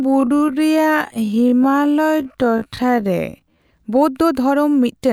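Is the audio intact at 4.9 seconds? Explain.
Yes, the speech at 4.9 seconds plays through intact, with no audible dropout, click, distortion or other fault at that moment.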